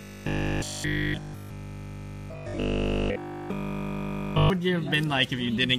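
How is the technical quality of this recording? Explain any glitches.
Poor for most of the recording. From 0.02 to 4.5 s there is robotic sound from repeated short buffers, a rigid metallic 50 Hz buzz that only roughly follows the underlying sound. It is likely caused by audio arriving too slowly, with essentially every stretch filled by looping a roughly 20 ms buffer. Unlike mains hum, the buzz replaces the sound rather than sitting beneath it.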